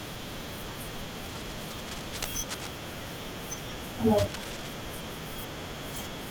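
Cable scratch noise appears twice in the speech, from 1.24 to 2.67 s and again from 4.15 to 4.74 s, sitting roughly 10 dB below the talker as a gritty rustling. A worn lead or connector being handled is the likely cause, its contact resistance jumping erratically. On a spectrogram each stretch shows dense, broadband speckle with uneven vertical streaks. The waveform carries ragged, spiky bursts riding over the speech envelope.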